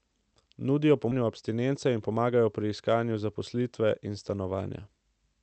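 At 1.11 to 1.13 s the speech lurches forward with no gap, as if roughly a second has vanished and the two sides are butted straight together. This is a skip ahead: a stretch of audio was discarded while later audio was already queued, so playback jumped past it.

From 1.21 to 2.33 s, just before "pri iskanju", the speech sounds slightly rushed while its pitch stays put, running at about 107 % speed. This is a jitter buffer speed-up: the buffer had overfilled and trimmed short pitch-period slices, around 70 ms in total, to catch up. Through the call codec, the sound stays limited to about 8 kHz.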